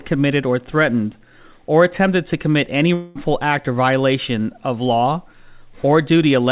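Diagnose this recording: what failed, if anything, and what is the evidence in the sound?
From 2.94 to 3.17 s, after "attempted to commit any", a fading buzz stands in for the audio until "act or violation of" resumes: likely a long network dropout, with the receiver concealing the gap.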